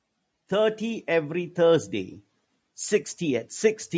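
Speech recorded through call microphone processing, with nothing above 8 kHz, showing automatic gain rising from 0.49 s to 3.55 s: the gain control judged the input too quiet and lifted its level by about 7 dB, so voice and background swell together over three seconds.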